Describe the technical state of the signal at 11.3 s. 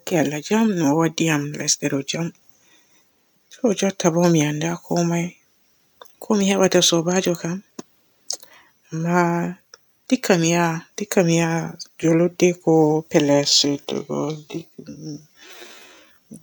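At 11.3 s the speech signal is intact, with no fault present.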